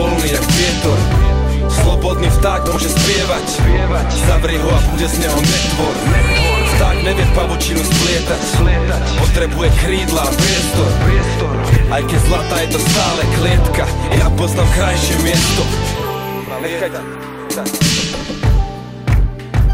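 Frames out of order garble the audio in seven brief spots, at 2.67, 4.88, 6.31, 11.68, 14.11, 16.45 and 18.2 s. Each stretch of about 90 ms (50 ms at 16.45 s) plays with its two halves swapped, consistent with 40 ms blocks (20 ms at 16.45 s), producing a fluttery jumble. Unlike a dropout or skip, nothing goes missing and timing stays intact.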